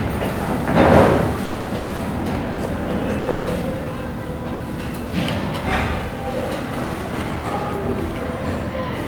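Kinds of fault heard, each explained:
Repeated packet loss (robotic sound): from 1.45 to 3.49 s, seven gaps in a row were patched by stretching the preceding sound, the longest 160 ms, leaving about 28% of the span concealed and 360 ms missing, so the sound turns choppy and robotic.
Burst of packet loss: at 4.54 to 4.63 s, a 60 ms run of packets never arrived in time; the receiver held and faded the last sound over the hole, then resumed later with that 60 ms of audio gone.
Jitter buffer speed-up: from 5.98 to 7.37 s, the receiver trimmed short pitch-period slices to drain a backlog of buffered audio, roughly a tenth of a second in total, so the sound runs about 7% fast without any change in pitch.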